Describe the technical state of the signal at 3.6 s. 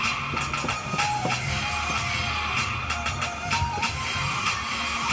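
The signal at 3.6 s is intact, with no audible fault at that moment.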